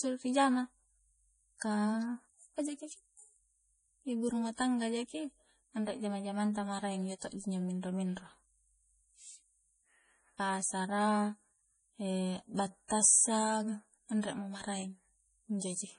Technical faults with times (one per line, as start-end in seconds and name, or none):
0.00-15.98 low-bitrate audio saved at a high bitrate